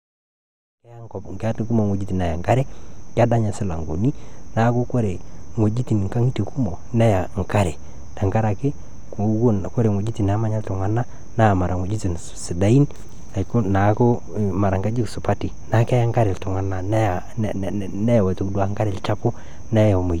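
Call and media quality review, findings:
No technical faults are present in the speech signal; the level rises in a smooth, editor-style fade-in from about 1 s to 1.78 s with no click or hard edge at the onset.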